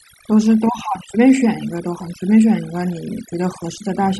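Overdone noise removal runs through the whole clip. The noise reduction was set too aggressively for the noise present, so it drives individual frequency bands down hard, or off entirely, whenever their level falls near its noise estimate. Quieter components of the speech fall under that threshold and are removed along with the noise. The background drops and breaks up into twinkling specks.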